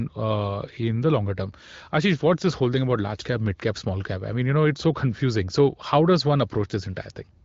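Nothing here counts as a fault: the speech comes through an AMR wideband (HD Voice) link that tops out around 7.5 kHz, and that narrower top end is just how the channel normally sounds.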